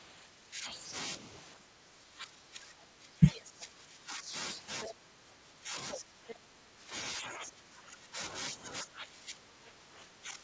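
Speech over a call path with nothing above 8 kHz, which fits a wideband codec such as G.722, shows speech suppressed in double talk at 0.24 to 0.84 s (about 10 dB down), 1.56 to 4.29 s, 4.89 to 6.79 s, 7.18 to 8.19 s (each about 20 dB down) and 8.54 s to the end (about 15 dB down). The likely cause is an echo canceller ducking the talker while the far side speaks. The other side's voice leaking through appears as a second voice at 3.32 to 3.41 s (about 10 dB below the talker), 4.82 to 4.93 s and 5.94 to 6.35 s (about 5 dB below), likely residual loudspeaker echo. It is set apart from room reverberation by carrying different speech rather than a smeared tail of the talker's own.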